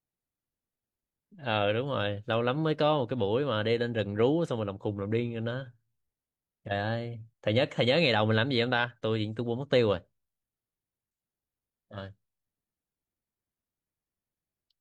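A short speech recording, with nothing technically wrong to be heard anywhere in it. There are no faults to report, and no times or causes to give.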